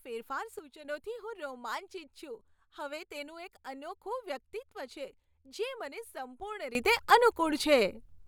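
At 0.59 s the speech and the background noise drop together by about 6 dB, then return at 0.85 s. From 6.75 s to the end both jump up by about 17 dB. These sudden gain jumps are likely unramped digital gain changes.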